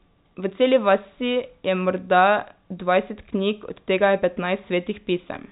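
Nothing here sounds wrong: it's a speech recording carried over ordinary G.711 telephone coding, so the sound stops at about 4 kHz the way a landline call does, and nothing is faulty.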